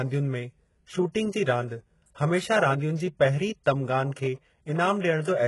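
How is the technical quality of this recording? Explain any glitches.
The recording has clear, constant codec damage across the whole speech clip. Throughout, nothing is present above about 11.5 kHz, and the treble that remains sounds synthetic rather than captured. The likely cause is heavy HE-AAC compression, with damage that fits a very low bitrate around 12 kbps. At that rate only the lower spectrum is actually coded. The upper band is rebuilt by copying lower content upward under a coarse envelope, so its harmonics do not align with the real signal. Sibilants come out gritty, metallic or lispy.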